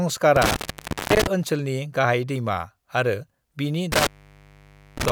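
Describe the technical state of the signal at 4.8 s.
At 4.8 s the speech has dropped out, leaving only faint hiss, inside an intermittent contact fault running from 3.92 to 5.10 s. A loose cable or plug has opened the line for about 0.91 s, with crackle where contact breaks and returns.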